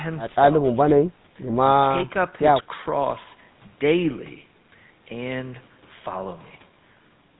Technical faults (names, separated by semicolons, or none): GSM full-rate codec